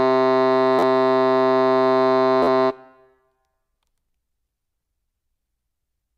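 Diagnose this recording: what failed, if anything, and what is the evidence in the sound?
Repeated buffer at the driver or buffer stage. The music stutters at 0.79 to 0.82 s, 2.43 to 2.47 s and 4.09 s. Each is a roughly 12 ms slice replayed with hard joins, which fits a 512-sample buffer. About 40, 50 and 10 ms of music are lost.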